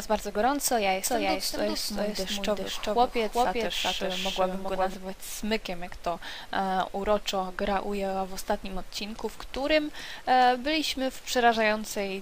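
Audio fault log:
1.04–4.94 s, doubled audio track: a second, full-band copy of the sound runs around 400 ms behind the original at roughly the same level, so every onset is heard twice with a distinct gap rather than a smear. The copy carries no decay or room colouring and cuts in and out abruptly at both ends, which points away from acoustic reflection and more likely to the signal being captured again through a slower path.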